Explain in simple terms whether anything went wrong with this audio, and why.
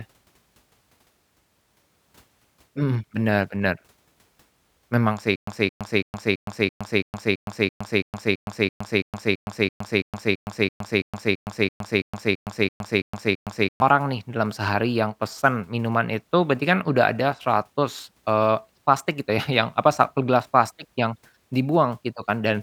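Something clearly goes wrong between 5.36 and 13.82 s: a stutter with silent gaps. The same 0.22 s scrap of speech plays, then about 0.12 s of dead silence, over and over, roughly three times a second, 25 times, before normal speech resumes at "nih dalam sehari yang". The likely cause is the player stalling and replaying its last fragment at each retry. Unlike a simple dropout, the sound doesn't just vanish: it repeats identically, and the speech that belonged in those eight seconds is lost.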